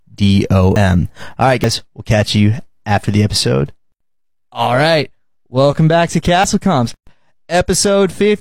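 Speech with three points where the sound jumps ahead, at 0.76 s, at 1.64 s just before "we'll catch you after", and at 6.44 s just after "right welcome back to". These are likely a dropped buffer (overrun), losing around 70 ms, 70 ms and 40 ms. At 6.94 to 7.07 s a 128 ms gap with smeared edges opens mid-sound before it resumes unchanged. This is a gap at a join of encoded pieces, left by encoder start delay and final-frame padding.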